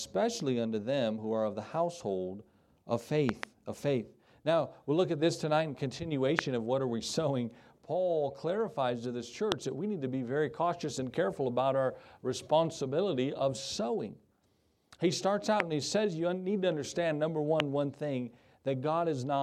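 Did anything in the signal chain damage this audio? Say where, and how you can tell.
Yes. There are loud pops at 3.29 to 3.45 s (a double pop), then single ones at 6.39 to 6.41, 9.52 to 9.54, 15.60 to 15.62 and 17.60 to 17.62 s. Each spikes roughly 20 to 25 dB over the signal, and the sound carries on underneath. That's a voltage step or pulse getting added on top, likely in the analogue wiring from a connector, switch or static discharge, with the following circuitry shaping each hit into a thump.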